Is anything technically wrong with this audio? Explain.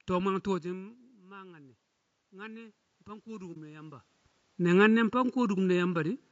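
Yes, four technical faults are audible in this speech.

Throughout, channel delay causes comb filtering. One channel arrives a bit under a millisecond late, and summing to mono cancels evenly spaced frequencies, with the first notch near 700 Hz. The voice sounds hollow and phasey. Unlike a muffled microphone, the notches stay fixed and repeat up the spectrum.

Also throughout, the voice is rough and grainy, with noise filling the gaps between harmonics and a thin, synthetic top end. This is likely low-delay AAC compression (AAC-ELD) at a low bitrate, whose short frames resolve pitch poorly. It differs from ordinary AAC smearing by that grain between harmonics.

From 0.63 to 4.11 s, automatic gain rises by about 8 dB. The talker moves away at about 0.5 s, dropping the input level, and the gain control slowly compensates. The voice and room noise swell together over seconds, whereas the talker's movement changes only the voice.

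From 3.53 to 3.57 s, AAC frame loss with muting leaves a 30 ms gap, which fits a single lost frame whose spectrum the decoder zeroed. Overlapping windows fade the sound out and back in, so it is a brief, soft-edged dip, unlike a hard dropout.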